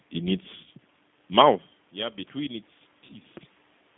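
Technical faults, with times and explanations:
Throughout, G.729 codec: the speech is sent at 8 kbit/s and rebuilt from a vocal tract filter, a pitch predictor and a few pulses per frame. Only 150 Hz to 3.6 kHz survives. The damage is plainly audible as a rough, synthetic tone.
0.64–0.69 s and 3.07–3.12 s, VoIP packet loss concealed by the speech codec: a 20 ms gap occurs just before "mouth yeah between its" and again just after it. The decoder repeats its last pitch and filter with falling gain. That gives a brief buzzy or noisy smear that fades.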